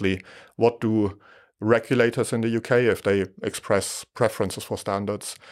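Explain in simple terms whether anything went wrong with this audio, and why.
Nothing went wrong with this speech recording, and no technical fault turns up anywhere in it. There is no moment where the sound breaks or changes in a way that would need explaining.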